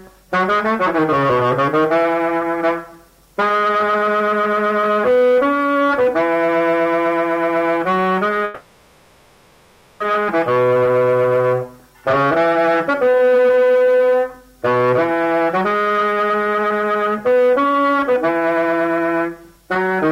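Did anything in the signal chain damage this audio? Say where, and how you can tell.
Yes. Between 8.44 and 10.01 s the sound stops moving and the last moment is stretched into a buzzy, fading fill that never reaches true silence. This is a call audio freeze, likely caused by packets held up in the network until the receiver's jitter buffer ran dry. About 1.56 s of fill is inserted, and the audio then resumes exactly where it left off with nothing lost. A plain dropout would instead remove material, and a codec mute would leave dead silence.

The jitter buffer speed-up occurs in two stretches: 12.04 to 12.89 s at 108% speed, and from 15.48 s to the end at 109%. The buffer stage trims one or a few pitch periods again and again to work off the delay built up earlier, cutting about 70 ms and then roughly 400 ms. The pitch stays put while timing hurries. Tape or clock speed errors would shift pitch and tempo together, which is how this fault differs.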